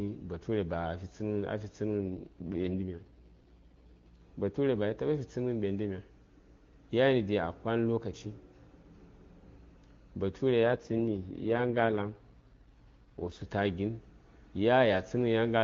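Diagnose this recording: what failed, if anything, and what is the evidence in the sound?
An AMR rate drop occurs twice, from 1.98 to 4.22 s and from 10.64 to 13.45 s. This is a network-side fault: the radio link weakened and the codec was switched to a low mode, which fits a fall from the 23.85 kbit/s wideband rate to about 6.6 kbit/s. Elsewhere the speech is clean. During both spans it turns rough and raspy, then recovers. Unlike packet loss, nothing drops out, and unlike a narrowband fallback the bandwidth stays wide.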